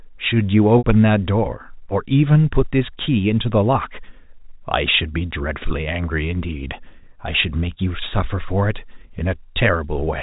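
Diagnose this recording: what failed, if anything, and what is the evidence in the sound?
A brief buzzy, held tone from 0.78 to 0.84 s: network packet loss with pitch repetition, the receiver looping the last pitch period across 60 ms.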